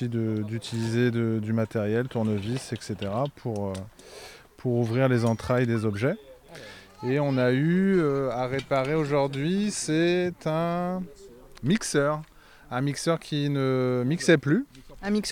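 No technical faults are audible.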